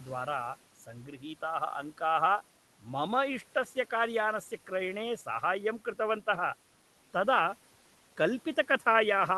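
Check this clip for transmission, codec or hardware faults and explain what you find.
One fault stands out: speech cut by the noise suppressor, from 1.05 to 1.25 s. The suppressor misjudged part of the speech as background noise and turned it down with the room sound for about a fifth of a second, by up to about 10 dB. The affected stretch sounds swallowed and faint. The room noise, sitting about 22 dB below the speech, belongs to the recording itself. The high end stops near 12 kHz, which fits an Opus call codec.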